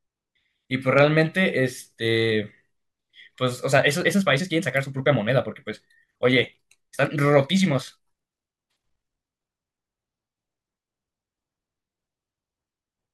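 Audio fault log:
3.68–9.66 s: time-stretched section. Across this span the speech plays about 1.55 times faster while its pitch stays where it was, so the pace jumps abruptly at the start and drops back at the end. The sound turns rushed. The likely cause is software squeezing this portion to fit a shorter length, keeping pitch by dropping short segments rather than resampling.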